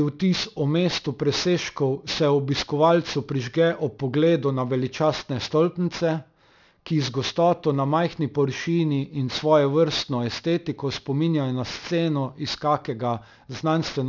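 Aliasing runs through the whole speech clip: energy above 6 kHz folds back below it, which fits a drop from 48 kHz to 12 kHz without filtering. Sibilants turn gritty and metallic, with the folded tones roughly 15 dB under the speech. Unlike plain low-pass dulling, this adds wrong, unrelated tones rather than just removing brightness.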